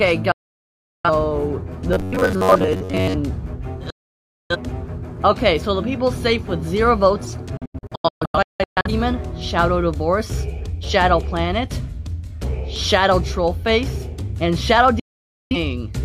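Digital broadcast dropout mutes the audio four times, at 0.32–1.10 s, 3.90–4.56 s, 7.57–8.90 s (several short holes, longest about 0.17 s) and 14.99–15.56 s, each cut with a fade of about 3 ms. On a waveform these are flat gaps, and on a spectrogram blank vertical bands across all frequencies. From 1.93 to 3.14 s the sound becomes a rigid metallic buzz at 93.8 Hz, likely robotic sound from repeated short buffers of about 10.7 ms standing in for most of the real audio. This shows as evenly spaced harmonics on the spectrogram and a regularly repeating waveform pattern.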